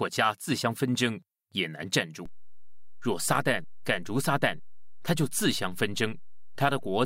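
At 2.26 s there's a DC step: the waveform's zero line suddenly jumps by about -35 dBFS and just stays there to the end. You hear it as one low thump at that moment, while the speech carries on exactly as before.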